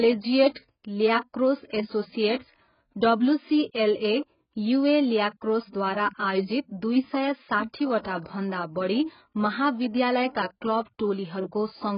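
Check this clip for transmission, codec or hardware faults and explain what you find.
Two codec problems stand out in this speech clip: heavy lossy compression across the whole thing, and one pre-echo.

The compression runs start to finish. Nothing comes through above about 5.1 kHz, so the speech sounds dull and boxed-in, and sibilants turn fizzy and smeared instead of crisp. That's most likely AAC compression, and heavily squeezed. To fit the bits, the encoder throws away the top band and roughly quantises what remains, which fits a very low bitrate, somewhere around 12 kbps.

The pre-echo runs from 5.69 to 5.73 s, right before "आयोजित दुई सय". There's a short hiss lasting about 44 ms ahead of the attack, and the onset itself sounds softened. The codec spreads its quantisation noise evenly across a whole transform block. The loud attack lands late in that block, so noise sized for the loud part spills back into the quiet gap before it.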